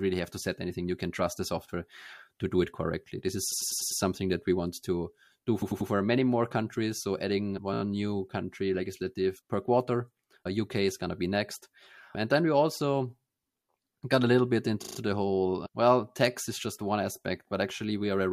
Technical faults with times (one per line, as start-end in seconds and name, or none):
3.52-4.01 repeated frames
5.61-5.89 repeated frames
7.73-7.82 repeated frames
10.43 repeated frames
14.82-14.97 repeated frames